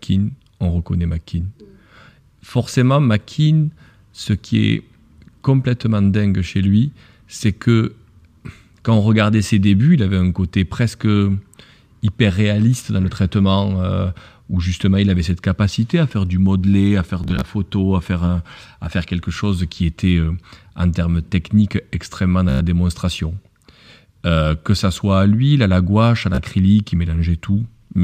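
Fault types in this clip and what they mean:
Bluetooth stutter: at 17.24 s, 22.49 s and 26.35 s the speech briefly chatters, because wireless packets arrived late or not at all and the receiver replayed its last short slice, losing about 76 ms, 107 ms and 30 ms before picking up further on.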